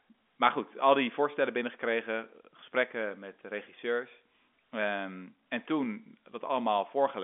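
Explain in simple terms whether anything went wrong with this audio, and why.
Nothing went wrong here.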